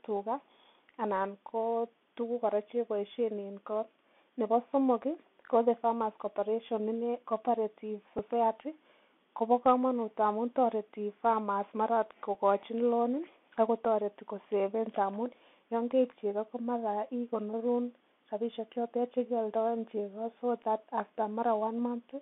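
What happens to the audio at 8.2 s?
At 8.18 s there's a Bluetooth headset packet repeat: about 7.5 ms of lost audio, consistent with a couple of dropped packets, gets patched by replaying the previous packet's bits, leaving a brief buzz near 267 Hz. Underneath, the Bluetooth CVSD headset codec keeps everything narrowband, roughly 200 Hz to 3.4 kHz, with its granular hiss and scratchy s sounds.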